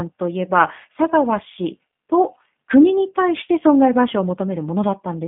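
Throughout, G.729 codec coding rebuilds speech from a filter and sparse pulses, fitting 8 kbit/s, giving rough, synthetic tone; spectrograms show energy confined between 150 Hz and 3.6 kHz.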